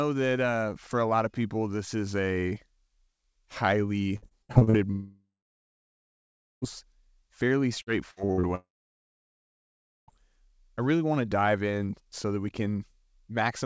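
From 4.16 to 4.76 s and 7.82 to 8.46 s, repeated packet loss makes the speech choppy and robotic. Each short gap is patched by stretching the last sound.

From 4.91 to 6.65 s and 8.55 to 10.11 s, the speech becomes a fading buzz or hiss, then silence. A long network dropout is the likely cause. The lost audio never returns.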